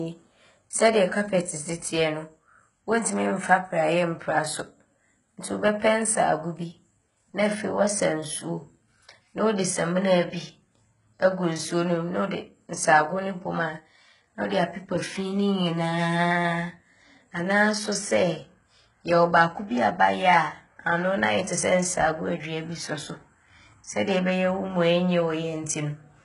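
From start to finish the speech carries heavy HE-AAC compression damage, likely from that codec at a very low rate, which fits a bitrate of around 12 kbps. Only the lower spectrum holds real detail; the treble is rebuilt from copied lower bands, so its harmonics fail to line up and s sounds turn gritty and metallic. On a spectrogram the upper region shows smeared, repeated blocks of texture, with nothing at all above 11 kHz.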